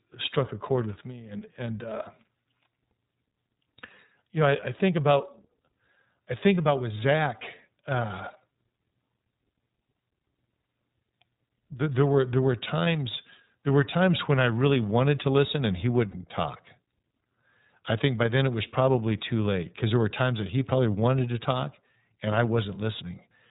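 From start to finish the speech sounds band-limited, slightly rough and synthetic, with nothing above 4 kHz. This is plainly audible iLBC codec damage. The narrowband coder rebuilds each frame's excitation independently, and the sound fits 30 ms frames at around 13.33 kbps.

At 16.11 s, right after "to listen and he", there is a brief held, faintly buzzy vowel-like sound lasting about 30 ms. This comes from lost iLBC frames. The decoder filled the gap, which points to a single missing 30 ms frame, by repeating the last pitch cycle blended with noise. Because iLBC frames stand alone, the speech recovers almost immediately afterwards.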